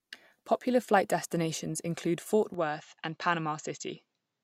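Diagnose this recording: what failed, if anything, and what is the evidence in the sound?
From 2.54 s to the end, the speech suddenly loses its top end and drops by about 5 dB, with no gap at the transition. The likely cause is an input switched to a poorer device at the driver or device stage. On a spectrogram, energy above 7.6 kHz stops abruptly at 2.54 s, and a faint new noise floor appears, around 55 dB below the speech. The waveform's envelope steps down at the same instant.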